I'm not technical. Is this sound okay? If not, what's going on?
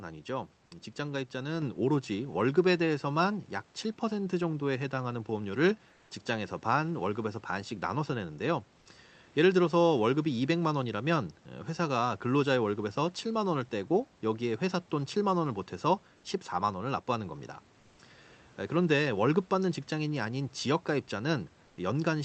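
No. At 1.62 s the speech and the room hiss behind it suddenly get louder together, in one step. That is a microphone volume stepped up: the calling software judged the microphone too quiet and turned its input level up.

In two short pauses, from 5.93 to 6.09 s and from 21.65 to 21.77 s, the natural room sound is briefly replaced by a flat, even hiss. This is comfort noise in place of the background, likely from the call's codec pausing transmission during silence and filling the gap with synthetic noise.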